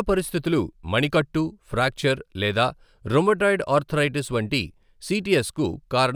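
Speech runs throughout with crude rate conversion: a gritty, inharmonic fizz, roughly 30 dB below the voice, that rises on loud and bright syllables. Unlike steady hiss, it tracks the signal. Its pattern fits linear interpolation from 32 kHz to 44.1 kHz without filtering.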